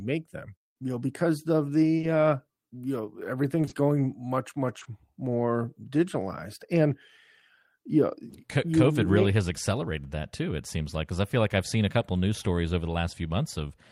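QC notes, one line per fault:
1.97–2.05 s, short concealed packet loss: a brief smear right after "know because of", before "uh you know", where about 40 ms of audio failed to arrive and the decoder stretched the preceding sound across the gap before blending back.
3.61–3.73 s, short concealed packet loss: a longer wobble between "uh you know" and "going much", three consecutive losses of 20 ms each, all patched by extrapolating the last sound.
4.79–4.87 s, short concealed packet loss: a short blur from two back-to-back 20 ms gaps filled by concealment.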